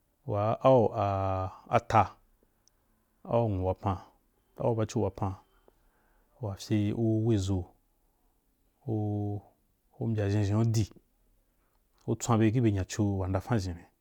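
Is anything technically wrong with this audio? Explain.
No, nothing stood out as technically wrong on listening to this speech recording.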